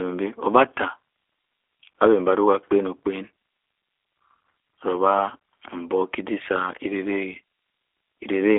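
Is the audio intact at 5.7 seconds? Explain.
No. At 5.7 seconds the speech carries G.729 codec damage, as it does through the whole clip. This codec rebuilds each 10 ms frame from a vocal tract filter, a pitch predictor and a few pulses, at a rate that fits 8 kbit/s. Fine detail is lost in that rebuild. The sound is slightly rough and synthetic, plainly so. The band is also narrowed to about 300 Hz to 3.5 kHz, so it sounds thin and muffled.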